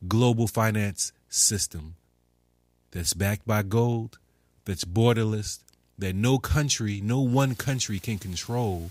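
A video or display buzz runs through the whole speech clip, roughly 40 dB below the voice. It is a 60 Hz buzz at the picture's field rate, picked up from a screen or video cable, with hash riding above it. Unlike plain mains hum, it sounds rasping and edgy rather than smooth.

From 7.49 s, right after "that no country no", through to the end at 8.91 s, low bit depth with dither sets in. The signal drops to very few bits, which fits an 8-bit signal, and dither turns the rounding error into an even, constant hiss about 25 dB below the speech. Undithered truncation would add grainy distortion that follows the voice, but this hiss stays steady and clean.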